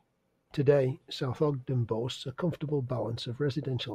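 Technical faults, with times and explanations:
Nothing in the recording stood out as a technical problem on listening.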